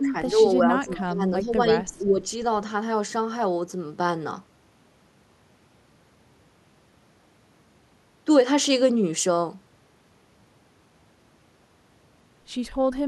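Speech, and the trouble is all packed into the first couple of seconds. The level dips three times: briefly from 0.0 to 0.15 s by a few dB, then across 0.66 to 1.69 s with about half a second of it pulled down roughly 10 dB, and again from 1.87 to 2.26 s, sinking about 15 dB at worst. That pattern is likely speech suppressed in double talk, where the echo canceller treats this talker as loudspeaker echo while the far end is speaking and turns everything down. There's also a faint echo leak at 0.87 to 0.93 s, a quiet copy of the sound arriving 337 ms late and sitting around 20 dB under the speech. That's likely an echo canceller letting a short scrap of its loudspeaker pickup slip back down the line.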